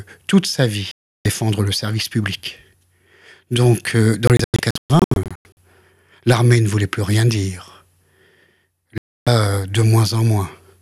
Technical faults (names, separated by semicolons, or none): digital broadcast dropout